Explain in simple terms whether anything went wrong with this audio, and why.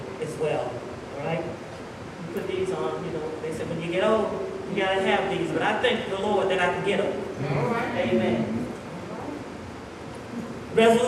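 Nothing went wrong here: I hear no technical fault anywhere in the recording.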